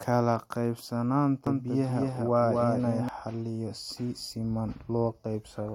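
Speech with a doubled audio track from 1.47 s to 3.09 s, just before "xaliyo si siman": a dry, full-band copy trails around 200 ms behind at about 5 dB quieter, cutting in and out abruptly. Likely cause: a second, slower capture path mixed in.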